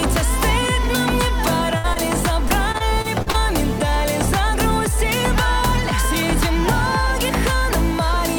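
From 1.78 to 1.86 s there is a burst of packet loss: about 60 ms of audio never arrived, and the receiver covered the hole by extending the last sound and fading it down, which gives a short held buzz or hiss. When playback picks up again it has jumped ahead, so that 60 ms is simply gone rather than delayed.

At 1.94 to 1.98 s comes a short concealed packet loss of roughly 20 ms. Again the decoder had nothing to play, so it carried the previous sound forward briefly and blended back into the real signal. The result is a small smear or wobble rather than a gap, and anything very brief in that window, such as a consonant, can disappear without an obvious break.

Between 2.48 and 3.36 s the stream suffers repeated packet loss, producing a robotic sound. Six separate holes fall within this 0.88 s stretch, the longest about 39 ms, adding up to about 160 ms missing, roughly a fifth of the span. 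Each gap is patched by continuing the last sound, and the next loss arrives before the signal settles, so the passage turns choppy, with pieces dropped out.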